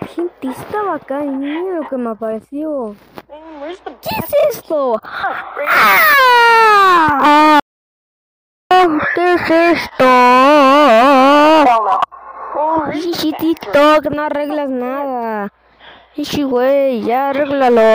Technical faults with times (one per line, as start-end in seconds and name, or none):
7.60-8.71 audio dropout to silence